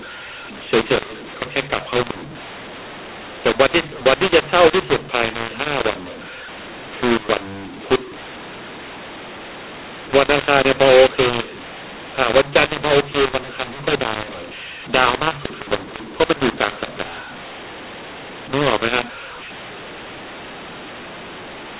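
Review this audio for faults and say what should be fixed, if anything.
Throughout, there's a mu-law and A-law mix-up. The mu-law speech was decoded as A-law, so levels scramble, everything sounds harsh, and the pauses hiss. Set both ends of the G.711 link to mu-law so the decoder matches the encoder.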